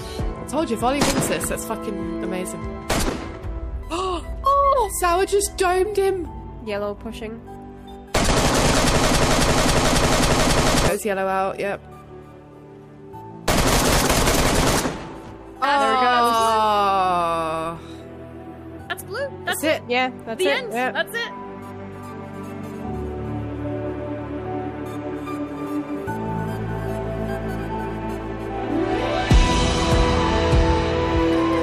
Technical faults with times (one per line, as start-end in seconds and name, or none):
9.05-10.88 broken-record loop